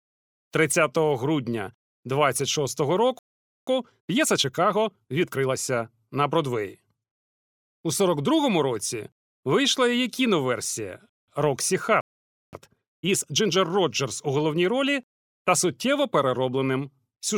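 At 3.19 s the speech cuts out mid-flow and the output sits in silence for about 0.48 s, until 3.67 s. This is a playback stall, most likely the player running short of buffered data or having its output thread held up, so nothing reaches the output until it recovers. The same gap recurs from 12.01 s to 12.53 s, this time lasting 0.52 s.

Right after each gap the speech comes back hurried but at its normal pitch. That is time-compressed catch-up: to work off the backlog left by the stall, the player trims small slices out of the audio and cross-fades across the joins. After the first stall it runs from 3.67 s to 5.59 s at 1.25 times normal speed. After the second it is pushed harder, 1.5 times speed, from 12.53 s to 13.57 s, and sounds noticeably more rushed.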